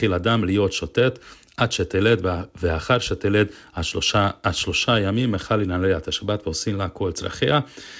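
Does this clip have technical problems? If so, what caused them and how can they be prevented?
No, the speech shows no technical faults; it has come through a call path whose coding leaves nothing above 8 kHz, a band limit that fits a wideband codec such as G.722.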